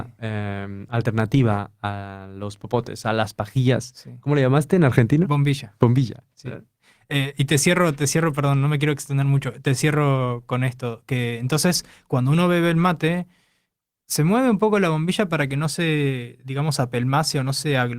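No faults detected anywhere in the speech recording.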